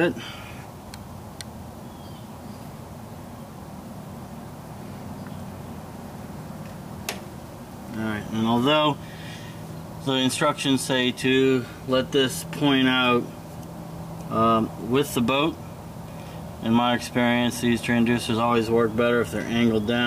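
Low bit depth without dither runs throughout the clip, from start to finish. A grainy distortion rides on the sound and changes with it, turning quiet passages gritty and making the faintest moments sputter or drop away. The likely cause is that the samples were rounded to very few levels with no dither, which fits a 7-bit signal. That leaves an error tied to the waveform, sitting roughly 30 dB below the signal.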